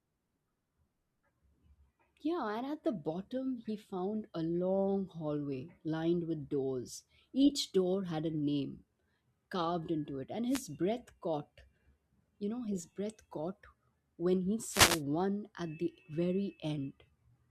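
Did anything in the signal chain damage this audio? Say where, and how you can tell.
Yes. The analogue radio link of a wireless microphone, ahead of the converter, briefly lost signal twice. Wireless microphone noise hits occur from 10.48 to 10.63 s and from 14.68 to 15.03 s, heard as short swishes of static over the speech. As reflected paths cancel the FM carrier, the receiver's own noise rises. The longer second fade lasts about 0.35 s.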